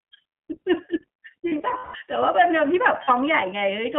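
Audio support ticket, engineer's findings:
iLBC codec throughout, clearly audible. Band limited to roughly 300 Hz to 3.4 kHz, with a slightly rough, synthetic edge on the speech. Narrowband VoIP coding, each 20 ms frame coded independently, which points to the 15.2 kbps mode.

Lost iLBC frames, 1.48 to 2.01 s: about 300 ms missing, scattered across 520 ms, with the longest gap around 150 ms. The decoder is repeating the last pitch cycle plus noise, which sounds like a buzzy held vowel. There's another short one at 3.04 to 3.10 s, about 40 ms lost. Recovery is immediate both times.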